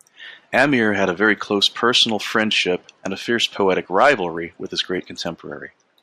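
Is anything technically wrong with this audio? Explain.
No, nothing technically wrong can be heard here.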